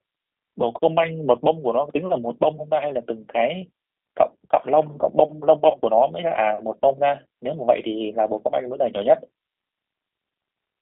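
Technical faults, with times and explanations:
Throughout: G.729 codec. The whole clip sits on a narrow phone-style band of roughly 250 Hz to 3.5 kHz, so there's no low body and no air on top. The damage is plainly audible: speech comes across a bit rough and synthetic because the decoder rebuilds it from a vocal tract filter, a pitch predictor and a few pulses per subframe, which fits an 8 kbit/s G.729A stream rather than the real waveform.
5.71 to 5.77 s: VoIP packet loss concealed by the speech codec. About 30 ms of audio goes missing, which fits a single lost packet. The decoder fills the gap by carrying on from its last pitch and filter settings while turning the gain down, so you get a short stretched, fading sound instead of silence. The recovery takes a little longer than the gap itself because each frame builds on the one before.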